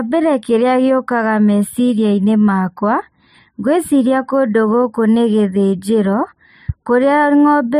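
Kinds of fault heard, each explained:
Channel delay (comb filtering): one channel of this speech runs a tiny fraction of a millisecond behind the other, which fits a lag of roughly four samples. When the two are summed to mono, content shared by both cancels at a notch near 7 kHz. The speech therefore sounds dulled and phasey at the top for the whole clip. A spectrogram shows a steady dark horizontal band around 7 kHz that never moves.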